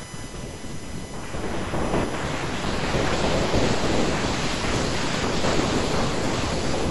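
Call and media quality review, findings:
USB whine, throughout the speech. Fixed-pitch whine on a 1 kHz harmonic series, strongest at 19 kHz, about 20 dB below the speech. Component: USB audio device power/ground. Mechanism: current drawn in 1 ms bus frames leaking into the audio path.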